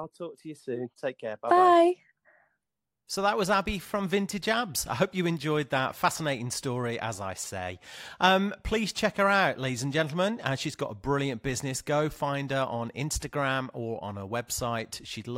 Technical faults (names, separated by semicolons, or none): none